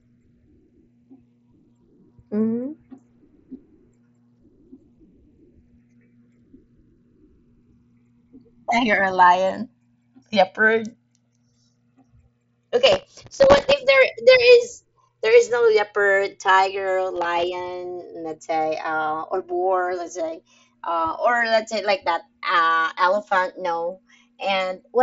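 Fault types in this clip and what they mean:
Channels drifting apart: The two channels run on separate clocks that differ slightly. The delay between them creeps up to a few milliseconds by the end. Summed to mono, comb notches sweep slowly through the speech, heard as a gradual flanging.
Processor overload crackle: The processor misses many very short buffer deadlines in a row, each around 1.5 ms. Missed slots replay stale audio with hard edges. Gritty crackle rides on the speech from 12.86 to 13.72 s and again from 17.16 to 17.44 s.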